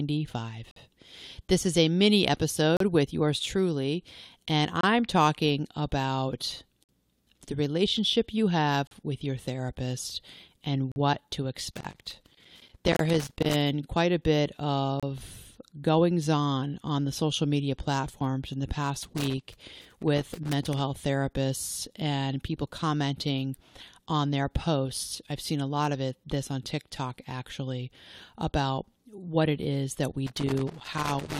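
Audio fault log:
0.71, 2.77, 4.81, 6.84, 8.87, 10.92, 12.97 and 15.00 s: gaps between stream segments. Hard-edged holes of silence, 25 to 51 ms long, land every 2 s (one falls right after "talking about"). That spacing fits 2-second segments whose timestamps don't quite butt up, so the player pads with silence without losing any audio.
11.72–13.54 s, 19.03–20.80 s and 30.27 s to the end: loose connector crackle. Irregular bursts of scratchy crackle, each under 2 s, with the last one running right to the end of the clip. It sounds like a worn or dirty contact making and breaking as it shifts, chopping the signal and popping wherever DC sits on the line.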